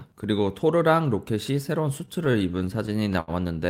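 A short speech clip with repeated stalls (stutter) from about 2.05 s to 3.31 s. In that stretch the audio keeps catching and holding, thirteen times in all. The longest hold is around 74 ms, and together they fill roughly 200 ms, about a sixth of the span. Nothing actually drops out. Packets were reaching the receiver late or slower than playback, so the jitter buffer kept draining and it stretched the last bit of sound until more arrived. That's why it drags rather than skips.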